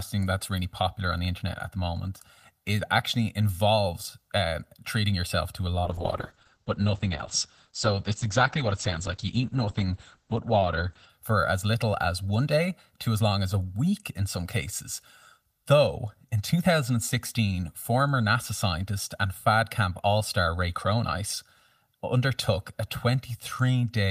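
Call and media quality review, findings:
Channel delay (comb filtering), whole clip: one channel lags the other by around 1.5 ms before the mono sum. Shared content cancels at evenly spaced notches starting near 300 Hz, giving a constant hollow, phasey colouration across the speech.

Call bitrate drop, 5.85–11.15 s, from "treating yourself to a" until "for as little as": bandwidth estimate collapsed. Sound suggests the encoder fell from about 32 to 9 kbps. Audio band narrows from 20 kHz to 8 kHz, turning muffled and watery for about 5.2 s before recovery.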